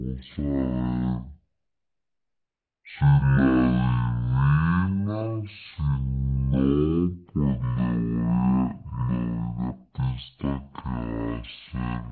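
From the first moment to the last, the speech is playing back far too slowly, a classic wrong sample rate problem. It's running at about 0.36 times normal speed and sits roughly 17.6 semitones low, which fits audio captured at 44.1 kHz being pushed out at 16 kHz with no conversion in between. Because nothing resampled it, speed and pitch dropped together, so everything comes out as a deep, dragging, syrupy rumble.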